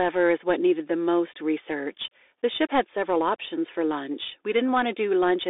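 A speech clip squeezed through a Bluetooth CVSD headset codec the whole way through. The sound sits in a narrow phone band, roughly 300 Hz to 3.6 kHz, with nothing at all above 3.7 kHz, which fits a 64 kbps CVSD link. The codec damage is plainly audible. It tracks the signal one bit at a time with an adapting step, so loud high content outruns it: s sounds come out scratchy, with a granular hiss underneath.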